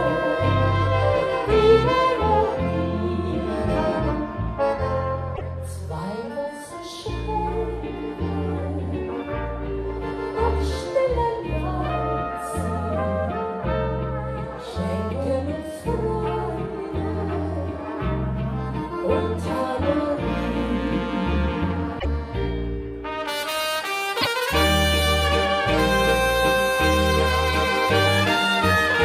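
Damaged data in a compressed stream shows up at 5.32 to 5.41 s, 21.96 to 22.05 s and 24.18 to 24.27 s. Each break lasts about 0.1 s. Part of the encoded stream arrived wrong at these points. The decoder could not read the frames there correctly, lost sync and searched for the next valid frame header. The result is a brief disruption in the sound, heard as a chirp, squawk, click or short hole, before normal decoding resumes.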